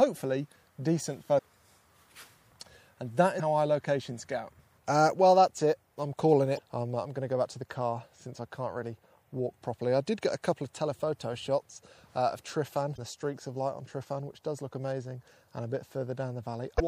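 From start to finish the sound is watery and swirly, with smeared attacks. That points to MP3 compression, likely at a low bitrate around 64 kbps. Unlike damaged data, this damage is continuous, not sudden bursts.

At 1.35 to 1.39, 3.36 to 3.40, 6.55 to 6.59, 12.95 to 12.99 and 16.76 to 16.81 s, short glitches of roughly 40 to 45 ms are damaged data in a compressed stream. The decoder misreads frames and resyncs, not the steady swirl.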